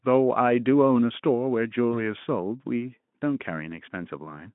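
VoIP packet loss concealed by the speech codec disrupts this speech clip from 1.92 to 2.00 s. A single 20 ms frame went missing, and the decoder filled the gap by extending its last pitch and filter settings at falling gain, giving a brief stretched, fading patch. Because each decoded frame depends on the one before, the damage lasts well beyond the lost 20 ms. The Speex coding itself, narrowband at about 150 Hz to 3.5 kHz, adds little audible damage.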